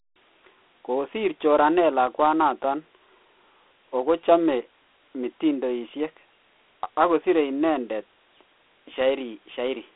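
From start to finish the speech carries Dialogic VOX ADPCM coding. Each sample is reduced to a 4-bit step-size difference, and at this quality that coarse quantisation leaves a plainly audible gritty hiss riding on the speech. The rate heard fits 32 kbps, 4 bits at 8,000 samples a second. Nothing reaches above 3.8 kHz, and the line band of 250 Hz to 3.5 kHz makes the sound thin and telephone-like.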